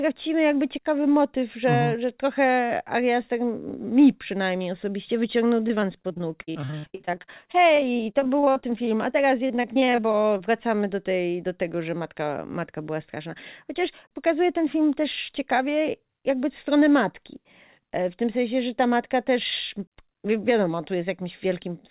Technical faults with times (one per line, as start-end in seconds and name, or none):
5.68-10.41 repeated packet loss (robotic sound)